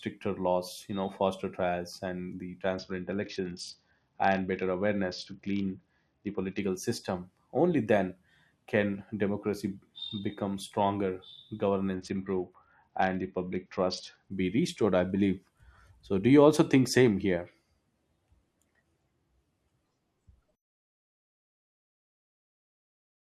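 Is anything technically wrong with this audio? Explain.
Yes. At 2.74–6.59 s, after "faster trials and the", and 11.94–14.31 s, before "be restored I believe", a Bluetooth SBC bit pool drop starves the upper sub-bands. The speech goes dull and gritty, consistent with a bit pool near 7 (about 66 kbps).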